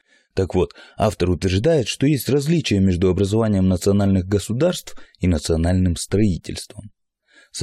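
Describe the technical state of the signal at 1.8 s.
At 1.8 s the speech signal is intact, with no audible fault at that moment.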